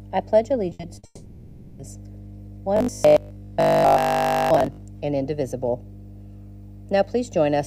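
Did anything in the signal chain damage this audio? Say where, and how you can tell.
Yes. Mains hum sits under the whole clip. It is a steady 50 Hz tone with low harmonics, at roughly 20 dB below the signal. It does not come and go with the sound, so it was added before digitising. The stage is the analogue wiring. A ground loop or a nearby transformer has coupled the power line into the signal.

Repeated packet loss gives a choppy, robotic stretch from 0.69 to 1.05 s. Five short holes fall in that span, the longest 60 ms. Each one is patched by stretching the last bit of sound, so nearly half the stretch is filler. Pieces of the real audio are simply missing. The choppy, stuttering texture points to the network. Packets kept arriving late or not at all.

A long network dropout follows from 1.05 to 1.81 s. The last sound is held and smeared as a fading buzz or hiss, then a brief silence. 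The audio resumes with about 740 ms never heard. The continuation is a concealment fill, not the real signal. That points to the network again. The likely cause is a long interruption in which nothing reached the receiver.

Robotic sound from repeated short buffers runs from 2.77 to 4.83 s. A rigid, metallic buzz at 50 Hz is laid over the sound, which still roughly follows its original shape. A fixed pitch like that comes from looping one short chunk. 50 Hz fits a 20 ms buffer being replayed. Most of the stretch is repeats rather than new audio. The stage is likely the driver or buffer, starved of fresh data.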